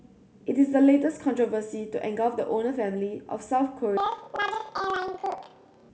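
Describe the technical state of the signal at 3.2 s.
At 3.2 s the speech signal is intact, with no audible fault at that moment.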